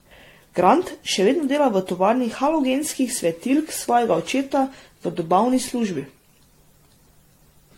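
Generation loss runs through the whole speech clip: the sound is swirly and hollow, consonant attacks are blurred, and nothing remains above 16.6 kHz. The likely cause is repeated lossy coding, with the audio decoded and re-encoded around four times. Each pass quantises on a shifted frame grid, so noise and spectral holes pile up. The damage sounds heavier than a single pass would leave, which fits an AAC-LC chain at roughly 64 to 79 kbit/s.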